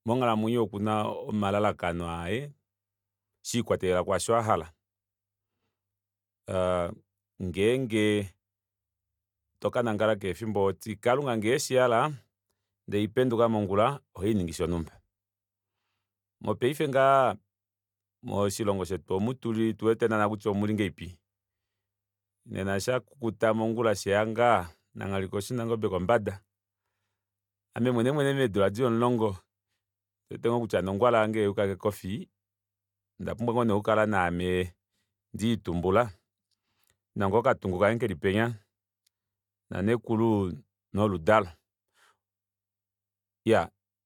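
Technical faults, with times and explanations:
No technical faults anywhere in the speech.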